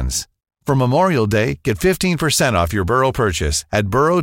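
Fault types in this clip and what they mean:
Nothing in this speech recording stood out as a technical problem on listening.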